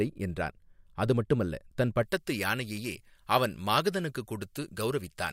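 From about 2.03 s to the end, the speech turns thin, bright and hissy, with sibilants spitting and the body of the sound receding. This is pre-emphasis left on: the treble was lifted before recording or transmission, but the complementary de-emphasis was never applied on playback. The treble sits about 11 dB hotter at 10 kHz than at 1 kHz, a tilt that fits a J.17 emphasis curve left uncorrected.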